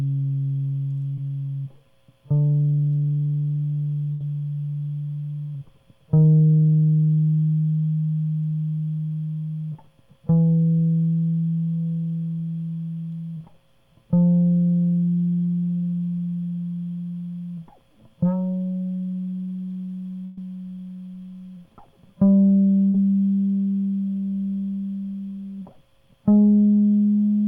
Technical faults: short concealed packet loss; burst of packet loss

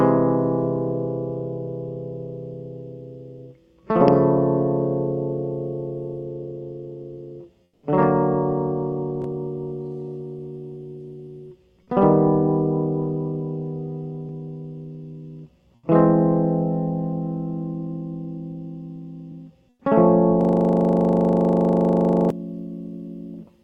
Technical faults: comfort noise in place of the background; onset clipped by the voice detector; system hang loop

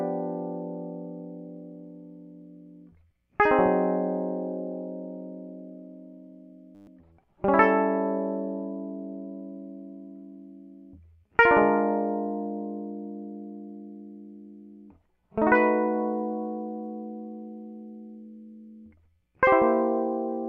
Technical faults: system hang loop

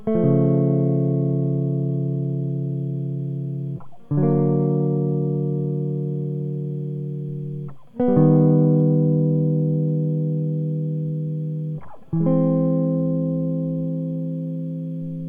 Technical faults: none

